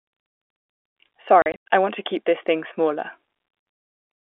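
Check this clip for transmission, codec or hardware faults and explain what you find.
One transmission fault is present in this telephone-band speech. Between 1.42 and 1.69 s, the speech is chopped by silent holes: packet loss filled with silence, about 180 ms missing over 280 ms, longest gap 100 ms, fitting 20 ms packets.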